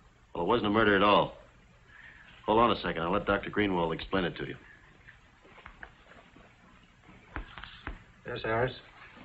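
No technical faults can be heard anywhere in the clip.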